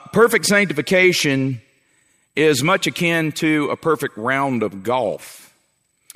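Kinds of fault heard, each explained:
Nothing here stands out as a technical fault; the audio just sits there sounding the way it should the whole way along.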